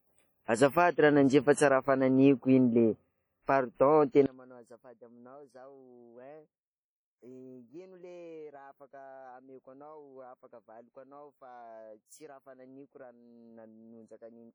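From the start, the speech shows the damage of a low-bitrate transform codec, likely WMA compression at a rate that fits about 32 kbps. Quantisation noise smeared across long blocks gives heavy ringing and a washy texture, with hiss that swells and fades along with the speech.

At 4.26 s, a polarity reversal, likely one channel inverted, makes the content shared by both sides cancel when they are summed to mono. From there to the end the speech drops by about 27 dB, leaving only a residue of whatever differed between the channels.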